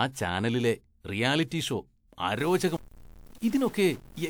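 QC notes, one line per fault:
2.39–4.29 s, stuck bit: from here to the end the speech picks up a gritty distortion and the pauses fill with noise, likely one converter bit stuck at a fixed value.
2.77 s, CD skip: a brief mute of around 15 ms, then the audio resumes from another point, the laser jumping one or more disc turns forward or back.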